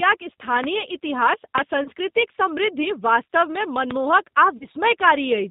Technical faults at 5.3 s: G.729 codec

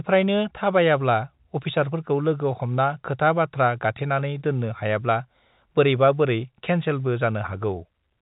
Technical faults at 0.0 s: none

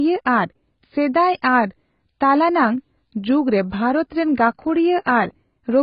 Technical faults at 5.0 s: AAC compression

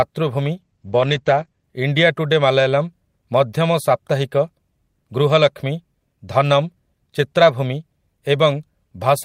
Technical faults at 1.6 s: call bitrate drop

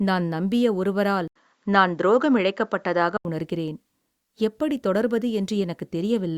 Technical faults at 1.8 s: input switched to a poorer device

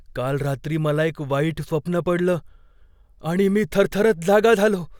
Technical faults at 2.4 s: none

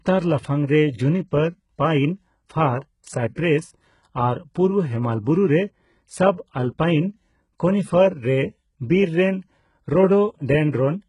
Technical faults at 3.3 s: HE-AAC compression; pre-echo

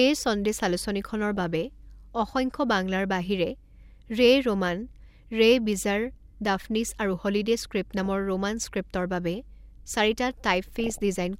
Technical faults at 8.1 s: DAB burbling

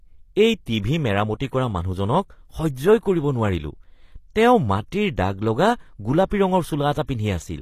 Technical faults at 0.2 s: HE-AAC compression

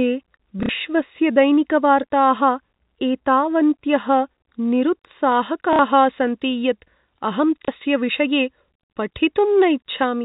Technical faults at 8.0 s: pre-emphasis left on

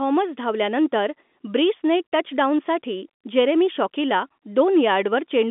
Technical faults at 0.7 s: none

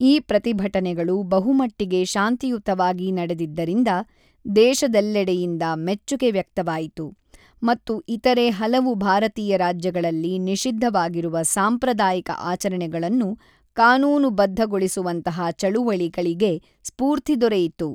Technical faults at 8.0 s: none

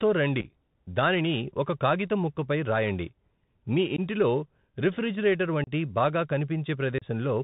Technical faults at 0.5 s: Bluetooth CVSD headset codec; unconcealed Bluetooth headset packet loss

